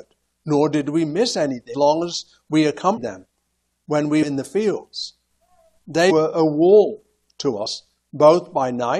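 Compressed frames skipped at 1.73, 2.96–2.98, 4.22–4.24, 6.10–6.12 and 7.65 s: the audio jumps ahead by about 70 to 300 ms of 23.2 ms frames.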